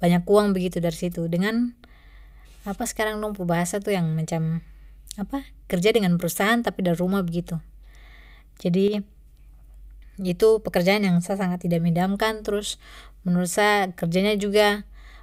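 From 8.88 to 8.94 s the speech dips abruptly by about 6 dB, likely one channel dropping out briefly before the stereo pair is summed to mono.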